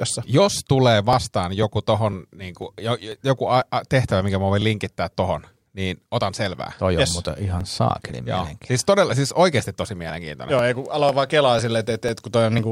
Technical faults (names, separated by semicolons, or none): periodic USB or driver dropouts